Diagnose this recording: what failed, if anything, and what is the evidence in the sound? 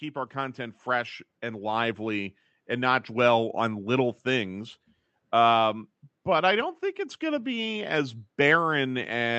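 In the call processing stage, the automatic gain control judged the input too quiet and raised its gain by about 6 dB between 0.33 and 2.39 s. Speech and background swell together over those two seconds, settling just before "and not dwell on".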